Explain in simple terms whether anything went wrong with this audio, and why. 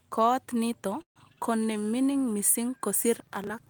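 At 1.01 s the speech stops and a brief fading buzz fills in, then about 100 ms of silence, before it resumes at 1.18 s with nothing lost. This is a call audio freeze, likely from delayed network packets that left the playback buffer empty, pushing everything after it about 0.14 s later.

From 3.14 s to the end at about 3.7 s, a gritty crackle tears through the speech. This is processor overload crackle: the computer was too busy to prepare each tiny slice of audio, a few milliseconds long, on time, and skipped around thirty of them, each leaving a small hard-edged gap.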